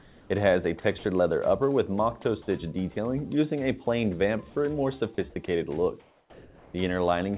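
The audio comes through a narrowband call path with nothing above 4 kHz. Comfort noise in place of the background appears from 0.0 to 0.3 s and from 6.0 to 6.74 s. The real background, about 29 and 28 dB below the loudest sound, turns into flat, featureless hiss. It drops about 3 dB, then about 1 dB. The likely cause is discontinuous transmission, with the receiver synthesising noise while the sender is silent. Sound dropped by the voice detector occurs at 0.98 to 1.04 s and at 5.46 to 5.48 s. About 30 ms, then 10 ms, of real sound is lost. Steady noise briefly fills each gap. The detector likely mistook quiet sound for background and stopped sending.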